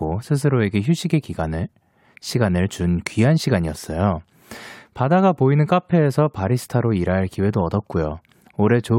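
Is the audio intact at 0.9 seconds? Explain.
Yes, at 0.9 seconds the speech runs cleanly, with no dropout, click, distortion or other fault at that point.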